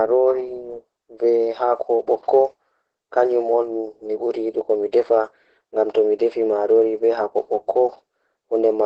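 Across the whole speech clip, Opus voice compression in its SILK mode leaves the sound muffled above 8 kHz, hoarse and faintly robotic, with heavy damage that fits a bitrate around 10 kbps. The coarse excitation coding adds grainy buzz, which sets it apart from simple low-pass filtering.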